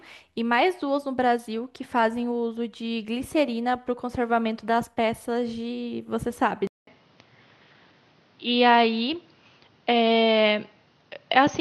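At 6.67 s the recording likely switched its input to a poorer device, and the speech stays on that path to the end. A gap of about 200 ms marks the change. The replacement input passes nothing above 6.4 kHz, so the voice abruptly turns dull and boxy. Its loudness shifts by roughly 5 dB, and a new background noise floor appears, sitting around 40 dB beneath the speech.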